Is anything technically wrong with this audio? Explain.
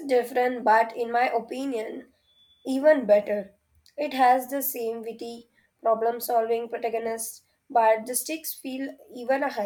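No, nothing is technically wrong.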